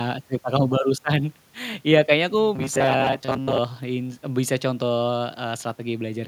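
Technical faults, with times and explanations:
2.56–3.60 s, robotic sound from repeated short buffers: a rigid metallic buzz at 134 Hz, likely a 7.5 ms chunk replayed over and over while most real audio was skipped.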